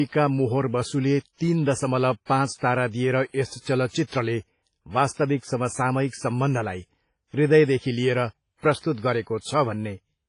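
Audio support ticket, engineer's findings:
Transform codec, likely WMA at low bitrate (fits roughly 24 kbps), zeroing weak lines throughout: speech sounds washy and ringing, hiss breathes with level, nothing above 10.1 kHz.

Pre-echo at 3.60 s, 3.89 s, 5.13 s (before "समसामयिक सम्बन्धलाई हृदयदेखि") and 8.79 s: block-wide quantisation noise leaks ahead of attacks, giving 36–57 ms hiss and smeared onsets.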